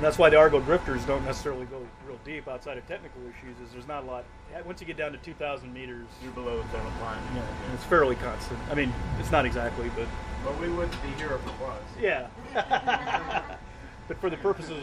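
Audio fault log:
1.30–1.77 s, zipper noise: a gain drop of about 15 dB is applied in unsmoothed 2 dB steps, about fifteen a second, so each step ticks audibly.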